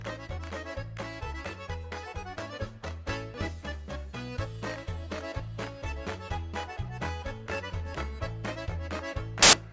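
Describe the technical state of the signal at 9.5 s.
At 9.5 s the signal is file tags played as audio: from 9.42 to 9.53 s an embedded cover picture, compressed data, is read as samples, giving very loud white noise with hard edges. Unlike a click or dropout, it is a sudden burst of structureless static.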